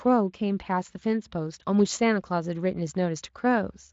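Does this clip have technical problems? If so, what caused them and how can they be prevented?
No, no technical faults here.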